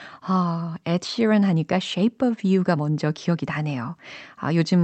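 Nothing stood out on listening to this speech recording, which comes through a WebRTC call path with an Opus codec whose audio band tops out around 8 kHz.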